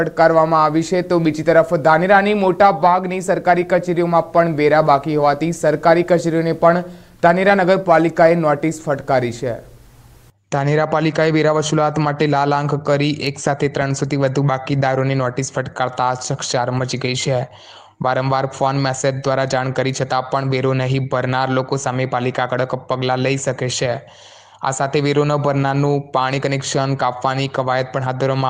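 No technical faults can be heard anywhere in this recording.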